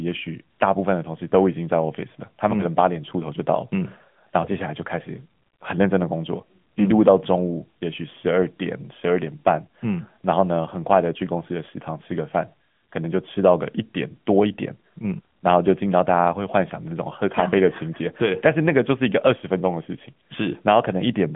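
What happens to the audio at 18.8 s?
At 18.8 s the speech carries the AMR narrowband mobile codec, present throughout: a pulse-driven vocal-tract model at a rate fitting 10.2 kbps leaves it plainly buzzy and synthetic. A spectrogram shows a flat ceiling near 3.6 kHz.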